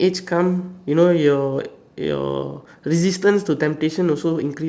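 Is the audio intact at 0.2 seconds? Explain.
Yes, the audio is intact at 0.2 seconds, with no fault audible at that moment.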